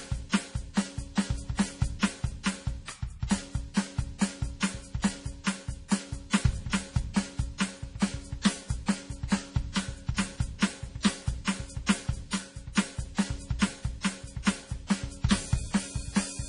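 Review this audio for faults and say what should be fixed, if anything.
MP3 compression likely causes the heavy damage throughout the music: the treble stops dead at 10.5 kHz, and weak frequency lines switch on and off between frames, which points to a very low bitrate around 32 kbps. Prevent it by sourcing the original or encoding at a much higher bitrate.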